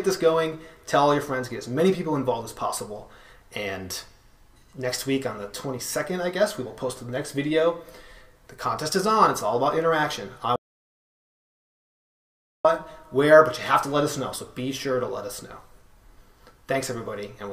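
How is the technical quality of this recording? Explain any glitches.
One clear glitch stands out: an audio dropout to silence from 10.56 s to 12.65 s, lasting about 2.09 s. The sound cuts off abruptly mid-flow and returns just as suddenly. The gap is silent with no room tone or hiss underneath, which sets it apart from a noise gate or a quiet passage, where some background would remain. The likely cause is a briefly lost input, with the recorder writing zeros until the signal returned.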